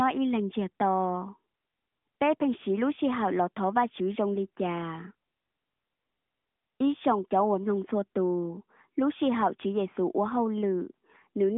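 Speech, with no technical faults to report.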